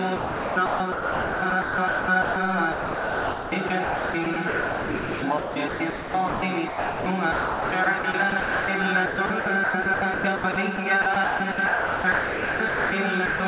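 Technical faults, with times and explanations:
0.16–2.36 s, 2.72–6.42 s, 7.32–8.68 s and 9.06–12.92 s: sound chopped by the voice detector. In each stretch the sound repeatedly gives way to a smooth synthetic hiss and then returns, with about 1.56 s, 2.58 s, 0.8 s and 2.06 s replaced respectively. The likely cause is the sender's voice detector toggling transmission on and off and the receiver filling the gaps with comfort noise. The generated noise sits inside the band-limited, 4 kHz-ceilinged sound of the call codec.
6.68–7.06 s and 13.26–13.40 s: sound dropped by the voice detector. The sound stops outright and is replaced by steady comfort noise for 0.38 s and 0.14 s, and it returns only when transmission resumes. This likely comes from the sender's detector classing low-level content as background and halting transmission. Nothing of the original survives in those gaps, so the result is a clean hole filled with even, featureless noise, not a partial dropout.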